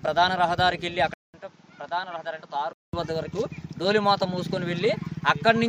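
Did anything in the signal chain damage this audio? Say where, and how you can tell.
Yes. From 1.14 to 2.93 s, after a 200 ms gap, the sound goes dull with nothing above 7.6 kHz, drops about 10 dB, and gets a new noise floor roughly 30 dB down. That's likely the input switched to a poorer device at the driver stage, then back.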